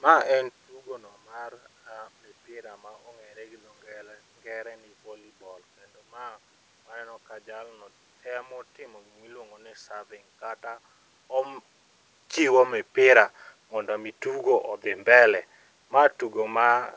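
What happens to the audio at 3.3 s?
Nothing goes wrong at 3.3 s: the speech passes through intact, with only the room noise beneath it.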